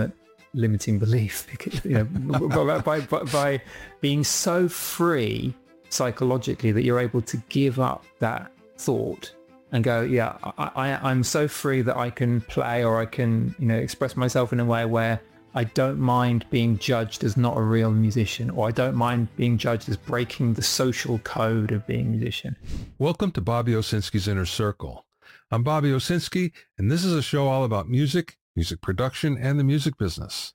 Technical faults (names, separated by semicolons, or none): sample clock jitter